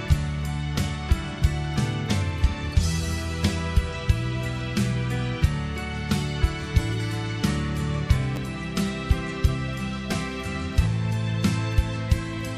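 A repeated buffer at 8.36 s sounds as a brief click. One tiny slice plays twice with a hard join, which fits a late 10 ms buffer. About 10 ms of audio is lost.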